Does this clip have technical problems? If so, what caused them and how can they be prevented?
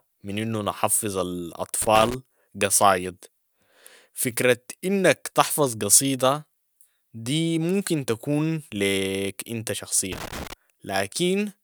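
Yes: loose connector crackle at 1.82 to 2.14 s and 10.12 to 10.53 s. A worn contact intermittently breaks, chopping the speech into irregular spikes and broadband vertical streaks. Reseat or replace the cable and clean the contacts.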